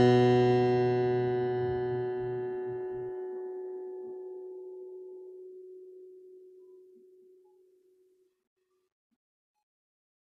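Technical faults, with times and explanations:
Throughout, generation loss. The music sounds swirly, smeared and hollow, and attacks are blurred. The likely cause is about three rounds of lossy re-encoding, each quantising on a shifted frame grid, so noise and spectral holes pile up. The damage fits AAC-LC at 64 kbit/s.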